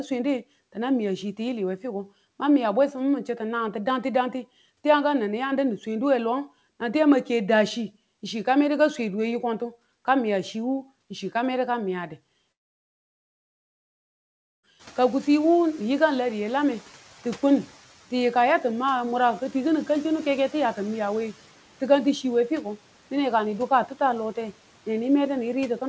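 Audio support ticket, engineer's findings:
Long network dropout, 12.52–14.66 s: audio stops for about 2.1 s, the last sound decays into a fading buzz or hiss, then silence, and the signal resumes with that stretch gone. Likely a packet-loss gap; waveform shows a flat run, spectrogram a blank vertical band.

Noise suppressor catching up, 14.79–17.66 s: room noise jumps about 21 dB around 15 s and passes through with little reduction, then sinks by about 6 dB over 2.87 s as the noise estimate adapts. Spectrogram shows broadband floor brightening, then gradually darkening; waveform floor visibly tapering. G.722 path shows its expected ceiling, nothing above 8 kHz.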